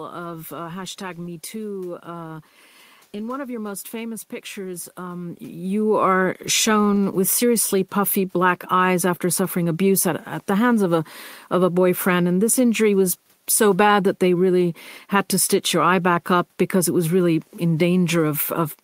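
No technical faults are present.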